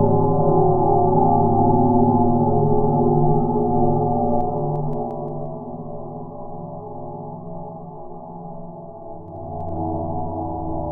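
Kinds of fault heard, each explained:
Zipper noise: the level drops, then rises, about 10 dB in unsmoothed 2 dB jumps, each clicking, so the fades tick rather than glide like a fader.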